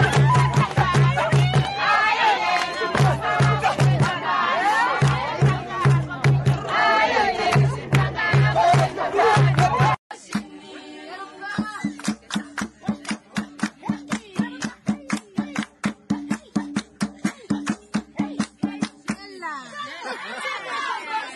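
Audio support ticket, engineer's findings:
Nothing stood out on listening; no findings to log against this ticket.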